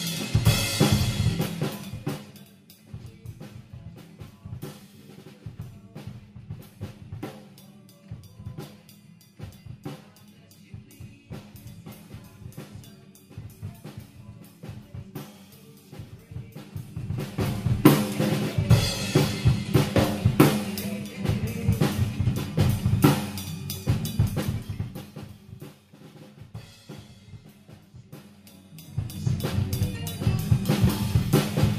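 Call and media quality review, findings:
Zipper noise on three gain moves: 16.65–17.88 s rising about 20 dB, 24.27–25.38 s falling about 20 dB, 28.19–29.33 s rising about 20 dB. Audible ticking at roughly seven to ten clicks a second. Probable gain stage applying 2 dB jumps per update with no ramp, so each step lands as a small discontinuity.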